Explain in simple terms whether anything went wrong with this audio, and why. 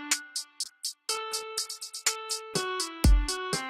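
At 0.64 s a call bitrate drop sets in and lasts to the end: the connection's bandwidth estimate fell, so the encoder had far fewer bits to spend. The sound turns coarse and muffled, loses its treble, and stays at its worst for about 1.4 s.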